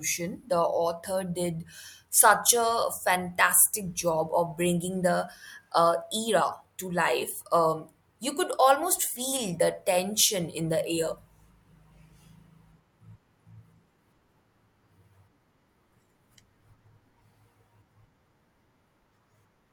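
No technical faults occur at any point, so there are none to describe in time order.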